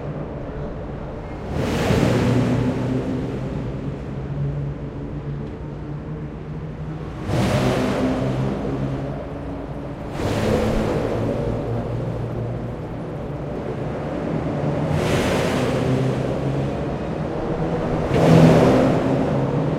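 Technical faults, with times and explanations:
13.56 s to the end, doubled audio track: Every sound is heard twice. A full-band copy trails by roughly a tenth of a second at about equal level. It starts abruptly, with no decay or room colour. Likely a second, slower capture path mixed in.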